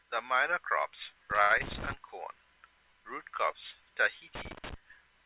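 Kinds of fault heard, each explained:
Loose connector crackle: A dirty contact chops the signal in scratchy bursts at 1.31–1.93 s and 4.35–4.74 s. They show as jagged waveform spikes and vertical broadband streaks.
Short stall from a late packet: After "the minor products", the sound is held 78 ms at 1.42 s, with nothing lost. It shows as a smeared flat band and a repeating waveform stretch.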